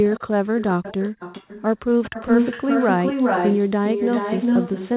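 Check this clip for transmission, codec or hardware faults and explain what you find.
Two faults are present: a DC offset across the whole clip, and echo leak in five stretches of the speech.

DC offset runs from start to end. The entire waveform sits displaced from the zero line by a fixed amount, so every sample carries the same constant added to it. You cannot hear a steady shift like that, but it eats into the headroom on one side. On a waveform display the trace is visibly off-centre; on a spectrogram it appears as a constant band of energy at the very bottom, near 0 Hz.

Echo leak appears at 0.04 to 0.30 s, 0.59 to 0.65 s, 0.83 to 1.63 s, 2.03 to 3.63 s, and 3.84 s to the end. A second copy of the speech trails the original by 407 ms. In the first three stretches it is well below the direct speech; from 2.03 s onward it is roughly as loud as the speech itself. The likely cause is a far-end loudspeaker whose sound reached that side's microphone and got past its echo canceller, so the returned audio came back delayed. 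A spectrogram shows the speech patterns repeated, shifted about 0.4 s to the right. In the later stretches the repeat is as dark as the original, and on the waveform the envelopes overlap into a denser, smeared shape. Across the clip the spectrogram is empty above 4 kHz, the normal band limit of the G.711 call codec rather than a fault.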